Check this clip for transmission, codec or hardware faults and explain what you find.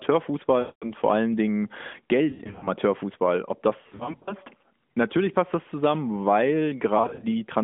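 The clip has one fault, lost AMR speech frames, in four bursts over the narrowband mobile channel. The first, at 0.60–0.93 s, drops about 220 ms. The others are scattered: 2.30–2.68 s (200 ms lost, longest run 100 ms), 3.82–4.34 s (260 ms, longest 60 ms) and 7.02–7.25 s (120 ms, longest 40 ms).

Corrupted frames fail their checksum, so the decoder repeats the last good pitch and vocal-tract settings at falling gain. The longest runs smear into a drawn-out sound that fades. The scattered losses sound like choppy dips and warbles. On a waveform the envelope sags and flattens. On a spectrogram the harmonics stretch into flat horizontal bands and then fade, all below the line's band edge of about 3.5 kHz.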